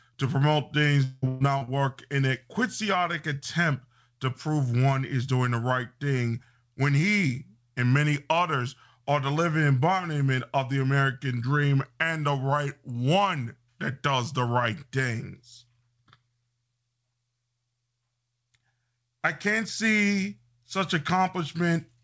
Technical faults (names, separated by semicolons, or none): repeated packet loss (robotic sound)